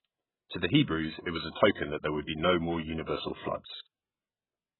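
All the way through, nothing comes through above about 4.1 kHz, and the speech sounds dull and smeared with a warbly fizz, likely heavy AAC compression at a very low bitrate, around 8 kbps.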